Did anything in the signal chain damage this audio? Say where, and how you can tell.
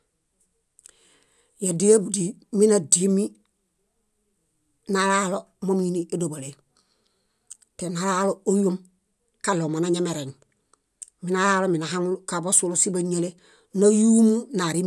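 Yes. From 1.16 to 8.84 s the speech carries a steady 25 Hz buzz of tiny ticks, present only while there is signal. That points to a resampler restarted on every block in the sample-rate conversion stage, likely from 48 kHz to 24 kHz. Each 40 ms block was converted without its neighbours' samples, leaving an error at every edge.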